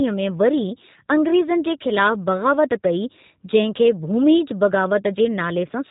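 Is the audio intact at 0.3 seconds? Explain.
No, the speech at 0.3 seconds passes through a G.729 codec throughout, which fits 8 kbit/s. It rebuilds each frame from a filter and few pulses, cutting everything above 3.8 kHz and sounding rough and synthetic.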